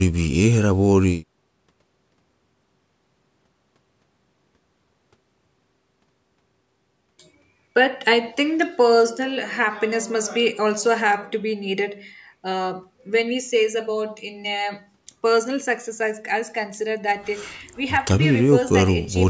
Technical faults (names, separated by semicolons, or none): none